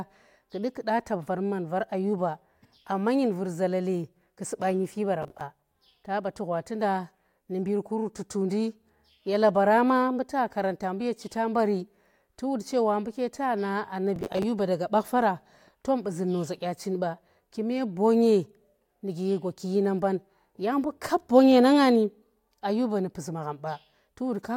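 At 5.22 to 5.41 s, after "ku suba nyifi", processor overload crackle tears through the speech. It returns from 14.16 to 14.43 s, before "daga bach faara tom". Many buffers of around 10 ms missed their deadlines. Each replayed old audio with hard edges, stacking into grit.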